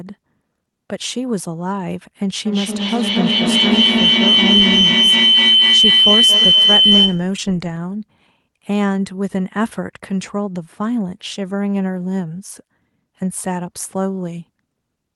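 A feedback howl runs from 2.45 s to 7.39 s. Sound from a loudspeaker is reaching a microphone on the same call and being sent back out louder on each pass. The loop keeps gaining, so the repeats, roughly a fifth of a second apart, narrow to a piercing tone near 3 kHz. It peaks about 7 dB above the speech and stops once the loop is broken.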